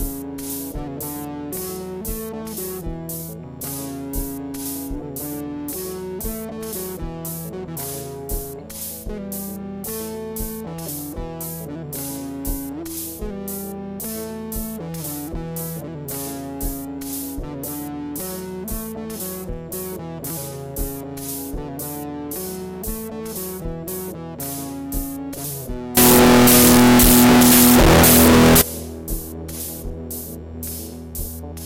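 Between 25.97 and 28.61 s the audio shows a float read as integer fault, likely 32-bit float samples read as integers, giving a harsh, near-square waveform at an almost fixed, high level and a broadband-filled spectrogram.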